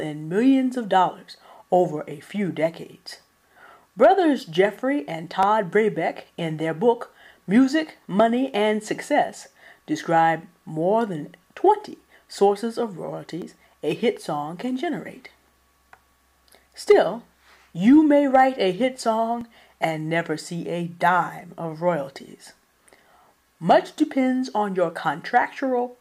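Periodic USB or driver dropouts tick through the audio every 2.0 s from 1.43 s to 25.42 s, around fifteen in all. Each skips about a millisecond of signal rather than inserting silence. The strict regular spacing separates them from random clicks or dust.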